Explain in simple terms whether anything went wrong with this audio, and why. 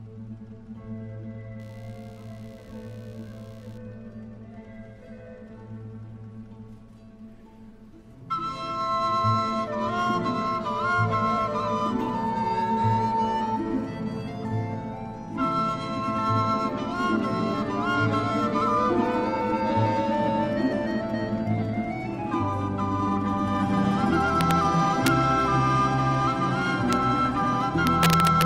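From 1.59 to 3.78 s there is a faint, scratchy buzz of roughly seventy pulses a second. This is computer activity noise. The computer's working parts disturbed the shared electrical ground of the audio circuit. That buzz follows the machine's activity, not the sound.

Near the end come sharp, violent cracks, at 24.41 to 24.51 s, at 25.07 s, at 26.93 s, and from 27.87 to 28.45 s. This is integer overflow. Loud peaks went past the largest number the system could store and wrapped around to the opposite extreme instead of being limited.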